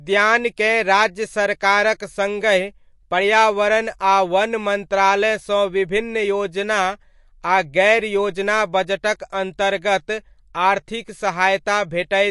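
Throughout, the speech sounds watery and swirly, and nothing remains above 11.3 kHz. The likely cause is MP3 compression at a bitrate near 48 kbps: short of bits, the encoder cuts the treble at a fixed point and drops weak frequency lines that flicker frame to frame.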